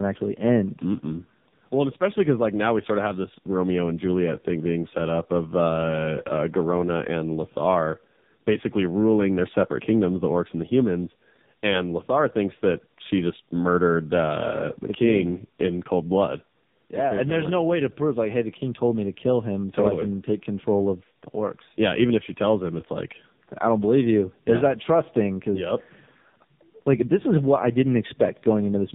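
Throughout, the speech suffers from tandem speech coding: it passed through two AMR-NB-type coders in a row, with a G.711 link between, each re-encoding the previous coder's degraded output. The result is rougher, noisier, muffled and warbly speech, with nothing above 3.7 kHz.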